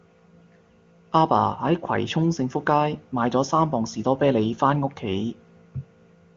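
No technical faults are audible.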